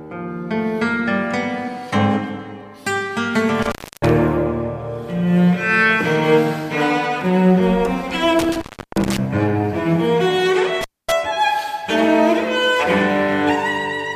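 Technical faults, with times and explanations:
3.62–4.09 s, 8.39–9.18 s and 10.81–11.12 s, intermittent contact: a loose cable or plug connection briefly breaks, so the signal path opens for about 310 ms, 330 ms and 240 ms respectively. Each time the sound drops out abruptly with crackle at the edges as the contact scrapes open and closed, and faint hiss remains while the line is disconnected, before the audio snaps back once the contact reseats.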